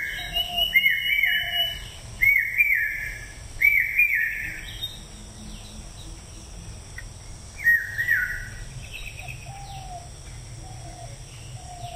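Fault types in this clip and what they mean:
Crude rate conversion: the audio was stepped up in sample rate by simply repeating samples instead of filtering, and the repeat pattern points to a 32 kHz to 48 kHz change, a 3:2 ratio. That regular stair-stepping folds shifted, inharmonic copies of the sound back in, here sitting roughly 20 dB below the sound itself, so throughout the clip you get a gritty, unrelated buzz or fizz riding on the louder and brighter moments.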